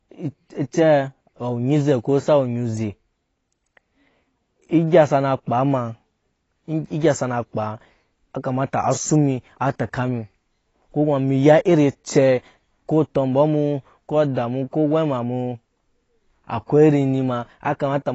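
Throughout the speech nothing survives above 7.9 kHz, and sibilants come out dull, smeared and fizzy, likely AAC compression at a low bitrate near 24 kbps.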